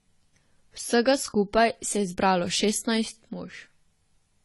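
From start to finish the speech sounds dull and smeared, with nothing above about 11.5 kHz and a watery, warbling fizz clinging to sibilants and held vowels. The likely cause is AAC compression at a low bitrate, and the damage is plainly audible. The narrow bandwidth and the smearing fit something near 32 kbps with AAC-LC. The encoder cut the top of the spectrum and quantised the remaining frequency lines so coarsely that gaps and noisy fill appear frame by frame.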